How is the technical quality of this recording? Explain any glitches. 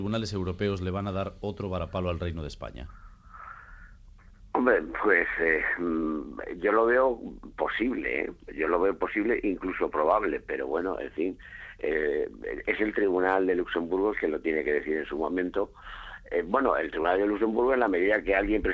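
The audio has passed through a call path, with nothing above 8 kHz, which fits a wideband codec such as G.722 at 64 kbps. There is one glitch.

From 17.03 to 17.05 s there is a short concealed packet loss. About 10 ms of audio did not reach the decoder in time. The receiver covered the gap with roughly 11 ms of synthesized continuation, extrapolating the preceding sound before cross-fading back into the real signal. The result is a brief smear or wobble near the end of the clip.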